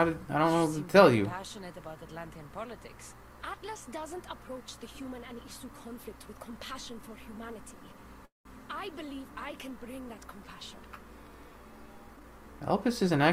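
A call audio freeze runs from 8.25 to 8.47 s: the sound stops, a brief fading continuation gives way to about 150 ms of silence, then resumes where it left off. The likely cause is delayed packets draining the jitter buffer, adding roughly 0.2 s of delay.

A jitter buffer speed-up follows from 12.16 to 13.31 s, as the receiver works off excess buffered audio by repeatedly cutting tiny pitch-period slices. Playback runs at about 110% speed with unchanged pitch, trimming roughly 0.15 s and sounding hurried.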